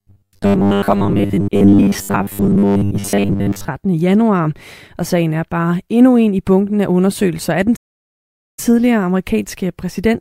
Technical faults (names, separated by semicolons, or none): robotic sound from repeated short buffers; playback stall